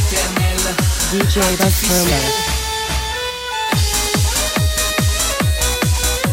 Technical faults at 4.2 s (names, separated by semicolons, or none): none